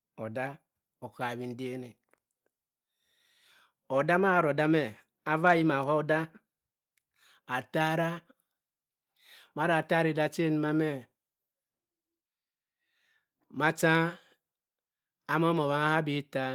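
No faults are audible in this speech; the Opus coding at 24 kbps keeps the full bandwidth, and its light coding texture doesn't rise to a defect.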